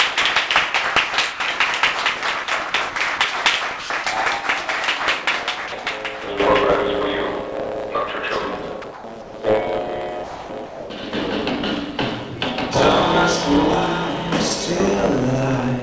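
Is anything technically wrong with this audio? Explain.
Yes, three kinds of fault can be heard.

A block size mismatch (truncated) runs throughout. One stage writes longer blocks than the next reads, so each block's tail is discarded. That produces a steady 109 Hz buzz and plays the audio 1.09 times fast at roughly normal pitch. Unlike resampling, the timbre stays the same.

Sound is dropped at 1.34 to 1.40 s (60 ms) and at 5.68 to 5.72 s (40 ms). Each time a single brief stretch gives way to steady noise or near silence and then returns. The likely cause is a voice detector misjudging quiet sound as background so that comfort noise was played instead. These are isolated gaps rather than repeated switching.

Sound is chopped at 2.44 to 3.20 s, 3.80 to 4.06 s, 8.82 to 9.34 s and 10.24 to 10.90 s. Within each span the detector likely toggled repeatedly, and about 120 to 500 ms of sound were replaced with synthetic noise. 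The repeated holes separate this from a single clean dropout.

The G.722 call path caps the bandwidth at 8 kHz.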